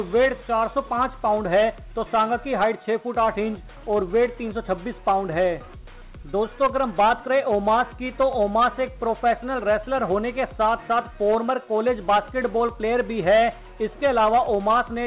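Nothing here goes wrong at any point; what you hear is an ordinary phone-style call path, with the band topping out around 4 kHz in the way a narrowband codec such as G.711 mu-law would leave it.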